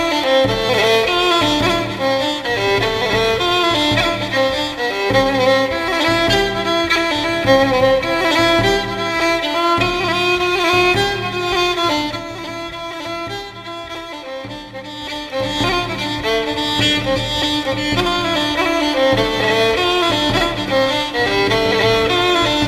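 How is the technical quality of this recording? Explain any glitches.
No glitches or technical faults turn up anywhere in this recording.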